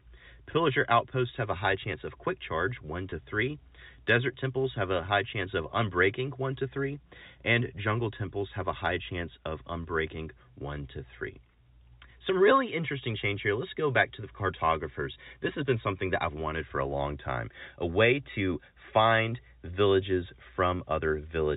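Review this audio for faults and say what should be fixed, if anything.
At 3.10 to 3.12 s there is packet loss with pitch repetition: about 20 ms of audio, which fits a single lost packet, went missing, and the receiver filled it by repeating the last pitch period. It sounds like a brief, slightly held buzz rather than the hard silent gap or click of a plain dropout. The G.711 A-law telephone band around it remains intact. A jitter buffer with forward error correction or packet redundancy on the network link would prevent this.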